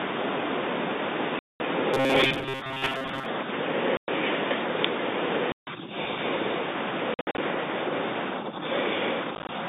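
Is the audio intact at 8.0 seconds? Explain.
Yes, the audio is intact at 8.0 seconds, with the speech carried cleanly through the telephone-band G.711 path and no fault at that moment.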